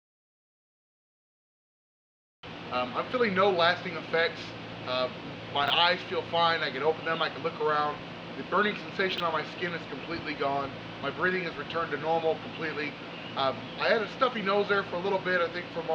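At 5.64 s, and again at 9.12 s, the audio shows chunks out of order: a 20 ms block arrives two, then three, blocks late and plays after its successors. Nothing is missing, but the reordered span sounds briefly jumbled, with three hard joins in each.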